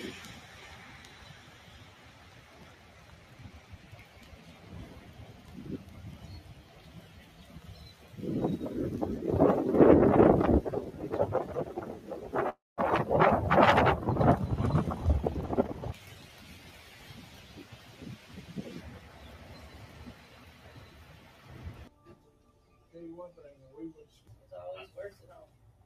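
Throughout, a noise suppressor tuned for speech treats held tones, ambience and decay as noise and pulls them down by around 10 dB, while attacks pass largely intact. Sustained parts sink behind each onset, so the sound pumps and thins.

From 12.49 to 12.80 s the audio freezes: the last sound is stretched into a fading tail that drops to silence for about 200 ms. Playback resumes where it stopped, likely because delayed packets drained the jitter buffer, adding about 282 ms of delay.

Between 15.41 and 16.79 s a jitter buffer speed-up trims short pitch-period slices repeatedly to shed the built-up delay, removing roughly 0.3 s. The sound plays at 120% speed with unchanged pitch, audibly hurried and losing steady timing.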